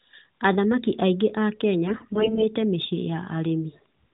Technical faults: AMR bit errors

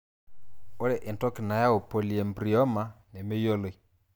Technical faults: none

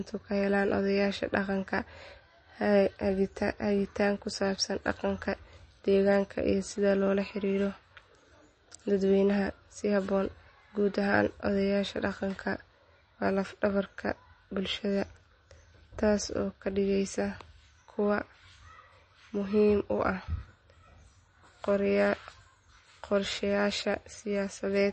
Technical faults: MP3 compression

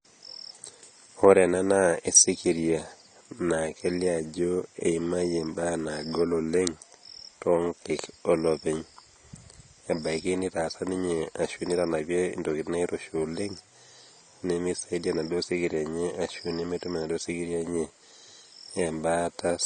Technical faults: AAC compression

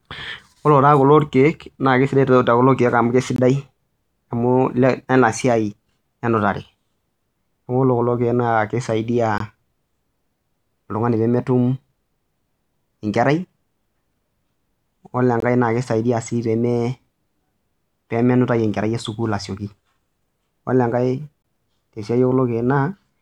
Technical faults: gap between chunks

